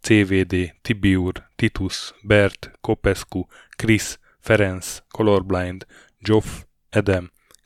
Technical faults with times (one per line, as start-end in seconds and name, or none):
7.13-7.16 loud pop